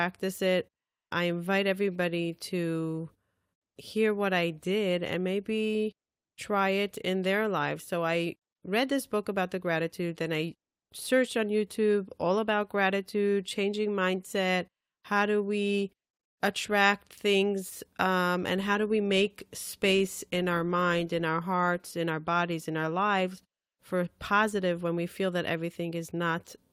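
No audible technical faults.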